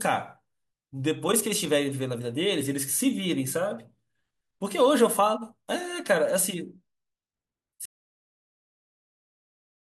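At 7.86 s the speech cuts off abruptly and the remaining 2.0 s, running to the end of the clip, is an audio dropout to silence. The gap is silent, with no room tone or noise floor, so the input signal was likely lost upstream, through a disconnected device, a failed link or an unintended mute, while the recorder kept writing empty samples. Nothing spoken after the cut survives.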